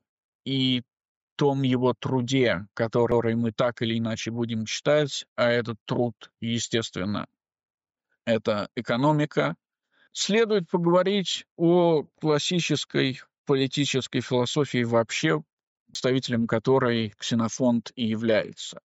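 The audio has two CD skips, at 3.11 s and 15.94 s. Each one is a tiny tick: a very short mute of a few milliseconds at the first and about 10 ms at the second, then the playback carries on from a different spot. That's the laser jumping to another turn of the disc's spiral after a knock or a flaw, so the sound lurches forward or back by a disc turn or more. The band also stops at 8 kHz, which is just the call microphone processing doing its normal job.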